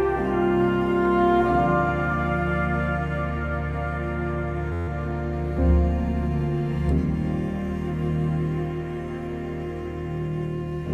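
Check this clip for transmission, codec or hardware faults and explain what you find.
One hardware fault appears. From 4.73 to 4.88 s the sound turns into a steady buzz at about 86 Hz. This is a system hang loop: the computer or its audio driver stalled, and the sound hardware kept replaying the same tiny stretch of its ring buffer. That stretch is 11.61 ms long, which fits a 512-sample buffer, and it repeats 13 times, so it reaches the ear as a pitched drone rather than a stutter. Little or no audio appears to be lost.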